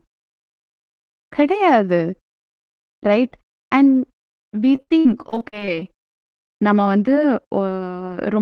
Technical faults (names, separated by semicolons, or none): repeated packet loss (robotic sound)